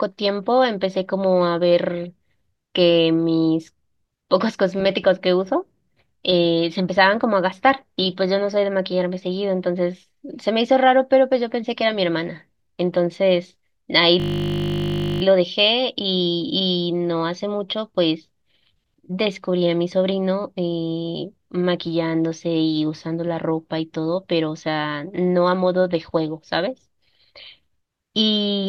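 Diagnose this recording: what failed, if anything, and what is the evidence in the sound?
System hang loop at the driver buffer. From 14.2 to 15.22 s, one 20 ms slice replays 51 times, a steady 50 Hz buzz while everything froze.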